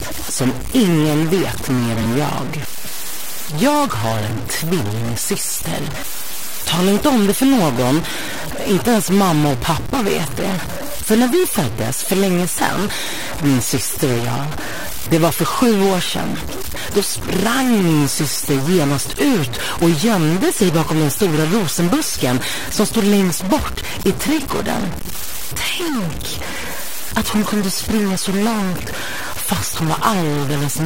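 A distortion runs through the whole recording, and quiet passages carry a gritty noise floor instead of silence. This is likely a stuck bit, where one data bit is held at a fixed value so that roughly half the samples are shifted by that bit's weight.

From 2.01 s to 2.06 s, frames out of order produce a brief garbled flutter. Two adjacent blocks of about 23 ms each, which fits single codec frames, play in swapped order, so nothing is lost but the sequence is scrambled.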